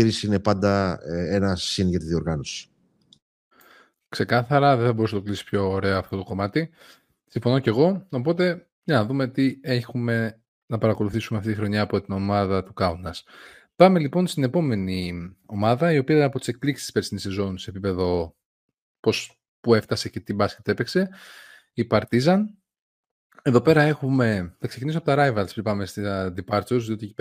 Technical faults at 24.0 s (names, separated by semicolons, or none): none